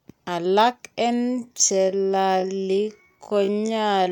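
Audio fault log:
1.12 to 4.12 s, time-stretched section: from 1.12 s to the end, the speech suddenly runs at roughly 0.54 times its original pace, just over half speed, while the pitch stays where it was. The slowed part drags. That is likely software lengthening the audio to fill a set duration, keeping pitch steady by repeating short overlapping fragments rather than resampling.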